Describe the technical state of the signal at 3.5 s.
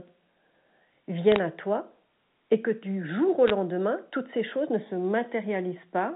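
Bit errors on a digital phone line hit from 3.48 to 3.50 s, right after "que du jour au". Flipped bits corrupt individual samples into sharp crackling ticks, while the underlying speech stays intact rather than dropping out.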